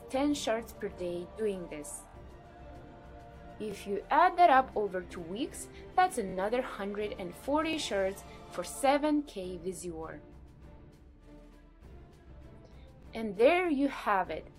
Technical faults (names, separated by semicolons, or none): repeated buffer